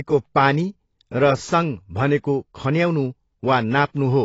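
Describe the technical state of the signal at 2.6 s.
At 2.6 s you're hearing AAC compression damage that runs through the whole clip: nothing above about 7.6 kHz, plus a smeared, warbly texture on the speech. That's likely AAC-LC starving its frequency lines, which fits a low rate around 24 kbps.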